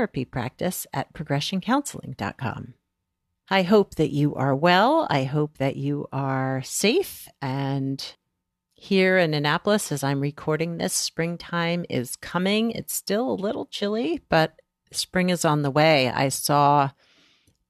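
No dropouts, clicks, distortion or level jumps turn up anywhere in the recording; nothing to flag.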